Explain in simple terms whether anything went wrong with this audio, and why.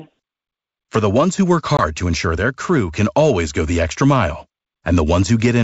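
Something did go wrong, briefly, between 1.77 and 1.84 s: packet loss on an ADPCM call. Right after "ones who work", a couple of packets never arrived, and the gap was filled with silence, leaving a hard-edged hole. The decoder builds each sample from its own running prediction, so after the hole it no longer matches the sender. The speech resuming at "to ensure their crew" has a short burst of distortion until the decoder catches up. The underlying G.722 wideband coding shows no more than faint wear of its own.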